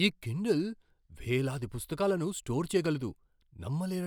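A loud pop lands at 2.86 to 2.88 s in this speech clip, just after "కిండిల్ వేలాది పుస్తకాలను స్టోర్". A single sharp click rises a few decibels above the speech, while the talking carries on underneath without a break. The likely cause is a brief voltage spike, from a switch, a connector or static, that entered the signal chain and was passed through to the recording as a short burst.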